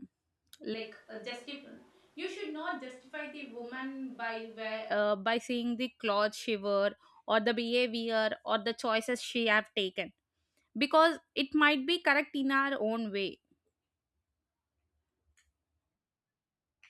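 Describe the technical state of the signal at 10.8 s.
At 10.8 s the audio is intact, with no dropout, distortion, glitch or other technical fault at that point.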